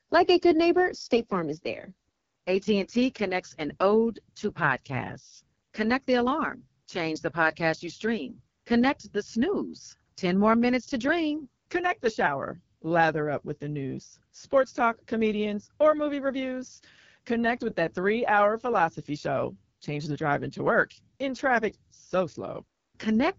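Right from the start and all the way through, the speech carries the sound of the AMR wideband (HD Voice) codec, and the damage is plainly audible. Nothing comes through above about 7.4 kHz. The codec models the vocal tract and drives it with pulses, so at a low rate the voice turns rough and raspy, with a grainy, synthetic edge. That roughness points to one of the two lowest AMR-WB rates, around 8.85 kbit/s.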